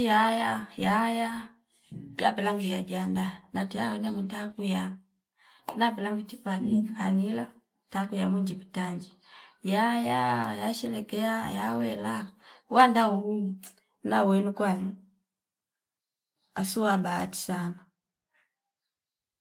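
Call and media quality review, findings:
No audible faults found.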